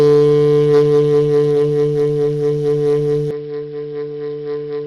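At 3.31 s the music drops to roughly 10 dB quieter and loses everything above 5.4 kHz, with no gap at the change, and a faint new noise floor appears far beneath it. This most likely points to the input switched to a poorer device.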